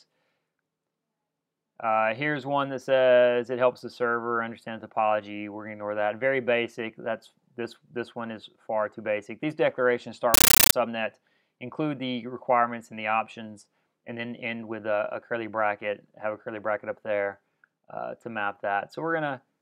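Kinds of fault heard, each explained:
Compressed stream played as audio: an undecoded AC-3 stream was treated as samples, giving brief, loud static that chatters in 13.3 ms bursts 31.25 times a second.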